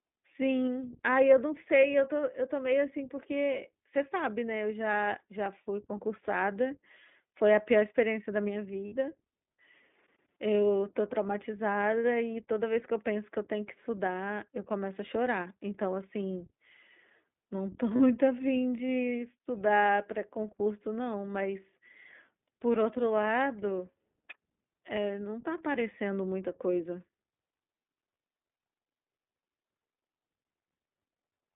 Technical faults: iLBC codec; lost iLBC frames

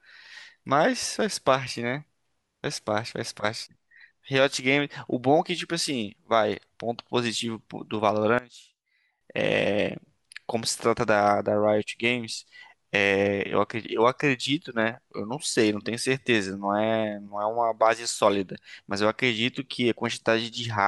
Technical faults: one channel inverted

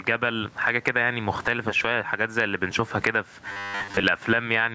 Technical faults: gain pumping; robotic sound from repeated short buffers

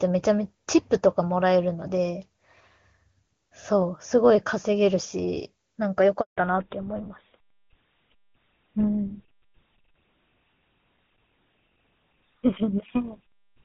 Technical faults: handover gap; fallback to narrowband

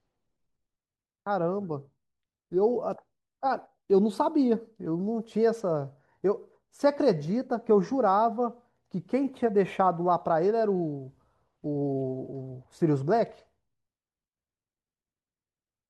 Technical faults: none

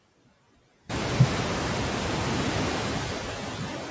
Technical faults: noise suppressor artifacts

